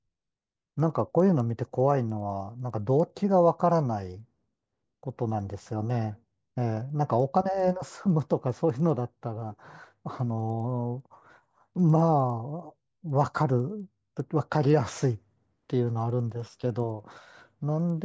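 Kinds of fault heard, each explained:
Resampler restarted on every block: The sample-rate converter ran on each 100 ms block in isolation, without the neighbouring samples it needed at block boundaries, so every block edge carries a small discontinuity. Across this speech clip that produces a steady ticking at 10 per second, present whenever there is signal, which fits a conversion from 24 kHz down to 16 kHz done block by block with no carried-over filter state.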